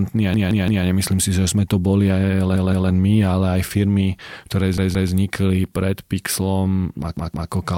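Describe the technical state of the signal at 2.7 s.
At 2.7 s you're in the middle of a repeated buffer, running 2.56 to 2.90 s just after "sme to boli aj". New audio arrived late, so the same 171 ms chunk, which fits an 8192-sample buffer, plays twice more with hard joins, a short stutter.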